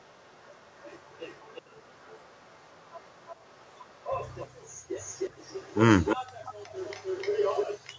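From 0.00 to 4.47 s, a faint echo leak trails the speech by 0.35 s, roughly 25 dB below it. It returns at 4.94–5.79 s, 6.03–6.17 s and 6.42–7.67 s with a 0.31 s delay, about 15, 5 and 10 dB down. This is likely a far-end speakerphone whose echo canceller let its microphone pickup through. A spectrogram shows each syllable's harmonics repeated as a weaker, later ghost, and the waveform shows smaller duplicate bursts after each one.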